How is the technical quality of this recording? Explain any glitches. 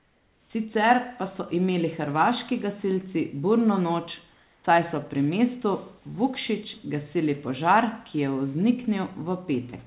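The recording is narrowband, with nothing above 4 kHz, which fits a telephone codec such as G.711, and room noise sits about 39 dB below the speech. Two glitches stand out. From 0.0 to 0.5 s, and again from 4.34 to 4.64 s just before "saj so pri mestu", the real room background gives way to a smooth, featureless hiss, about 4 dB and 2 dB quieter respectively. This is comfort noise in place of the background. The sender likely stopped transmitting during the pause, and the receiver filled the gap with synthetic noise shaped roughly like the room's ambience.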